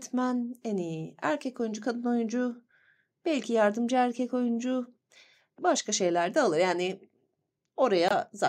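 Near the end of the speech, from 8.08 to 8.12 s, the sound cuts to silence for roughly 34 ms and then picks up again, with the speech continuing further along rather than where it stopped, as though it had kept playing through the gap. This is most likely a Bluetooth dropout: a packet of audio failed to reach the headphones in time and was discarded. The missing stretch fits a single lost packet of about 21 ms.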